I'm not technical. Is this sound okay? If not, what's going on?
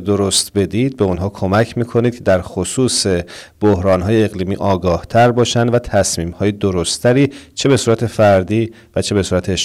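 No. Throughout the speech, the level was pushed higher than the recording chain could handle, so the loudest moments got chopped off flat. This is called hard clipping. A small share of the sound is affected, and you hear it as crackly, harsh edges on louder syllables.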